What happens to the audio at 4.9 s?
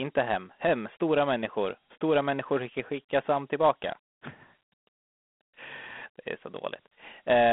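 At 4.9 s the speech is still passing through the Dialogic VOX ADPCM coding that runs for the whole clip. Each sample is stored as a 4-bit difference from a predicted value, with a step size that adapts as it goes, and the rate of 32 kbps fits 8,000 samples a second. Quantisation error follows the speech as a gritty hiss. The sound is confined to a telephone-like band of roughly 250 Hz to 3.5 kHz, with nothing above 3.9 kHz.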